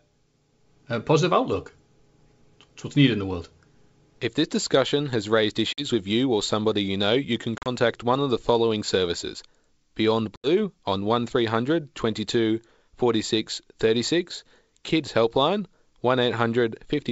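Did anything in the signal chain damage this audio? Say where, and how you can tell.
Yes: packet loss on an ADPCM call, in the network, at 5.73–5.85 s, 7.58–7.68 s and 10.36–10.48 s. Each leaves hard-edged silence totalling 50 to 80 ms. The decoder's predictor and step size then drift from the sender's, so speech returns slightly distorted.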